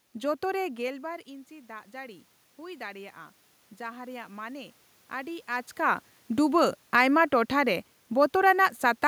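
From 0.8 to 5.49 s, automatic gain rising: the gain control, facing a voice about 16 dB quieter after the talker leans away near half a second, slowly adds about 8 dB. Voice and room noise swell together, recovering only part of the drop.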